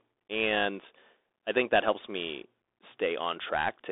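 From start to finish the speech runs through a Bluetooth CVSD headset codec. Energy sits between roughly 300 Hz and 3.6 kHz, with nothing above 3.8 kHz. The coarse, plainly audible damage fits a 64 kbps one-bit delta stream whose adaptive step lags fast, loud high components. What separates it from a clean telephone band-limit is that granular hiss under the speech and the scratchy, overdriven sibilants.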